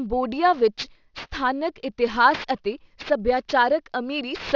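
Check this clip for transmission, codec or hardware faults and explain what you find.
Aliasing runs through the whole speech clip. The audio appears to have been downsampled, which fits a drop from 48 kHz to 12 kHz, with no low-pass filter first. Content above 6 kHz folds back below it at roughly 20 dB under the speech, so sibilants turn gritty and metallic and the spectrum runs hard up to 6 kHz.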